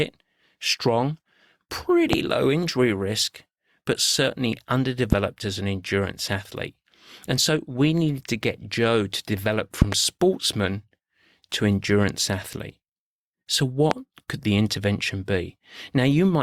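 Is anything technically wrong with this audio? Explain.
Yes, there's a loud pop problem in this speech clip. Single pops hit at 2.13 to 2.16 s, just before "low injury risk but", at 5.13 to 5.15 s, between "injury risk but certainly" and "as an endurance athlete", and at 13.91 to 13.94 s. A double pop lands at 9.82 to 9.95 s, right after "to develop". Each spikes around 20 dB over the voice, which keeps going underneath. A sudden voltage jump, likely from a connector, switch or static, kicks the signal.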